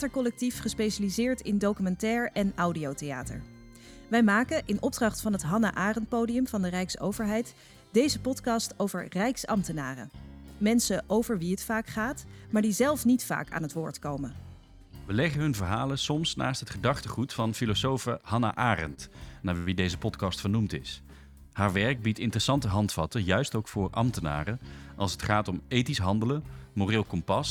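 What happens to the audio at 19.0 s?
A short stall from a late packet runs from 18.94 to 19.00 s. The jitter buffer ran dry, so the last sound was stretched for about 30 ms, then resumed where it left off with nothing lost. It sounds like a slightly held moment with a slight buzz or dip. On a spectrogram the harmonics run flat and repetitive, and the waveform shows a short periodic, looped stretch.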